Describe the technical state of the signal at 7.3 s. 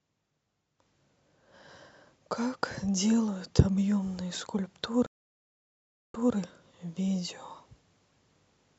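At 7.3 s the speech signal is intact, with no audible fault at that moment.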